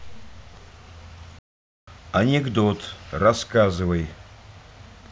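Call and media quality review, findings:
Playback stall in speech, 1.39 to 1.88 s. Output drops to silence for about 0.49 s mid-flow, then resumes. Likely cause: player buffer underrun or blocked audio thread starving the output device. Check decoder/render thread scheduling and jitter buffer depth.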